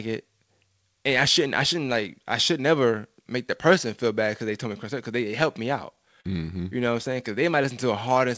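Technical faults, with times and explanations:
6.21–6.26 s, short stall from a late packet: Right here a packet just didn't show up on time, the jitter buffer ran dry, and the receiver held onto the last bit of sound for about 33 ms until the packet turned up. Then it picked up exactly where it left off, so nothing's actually lost. You hear a sound hanging on a touch too long, maybe with a faint buzz, and the playout delay ends up 33 ms longer.
6.93–8.19 s, jitter buffer slow-down: Over this stretch the receiver was rebuilding its reserve, so it kept repeating single pitch periods and little slivers of pauses, back to back. That adds about 66 ms in total, which puts playback at roughly 95% speed. The pitch stays put, but everything feels a little drawn out, with maybe a slight warble on held sounds. Since this is a G.722 call path, there's also nothing above 8 kHz.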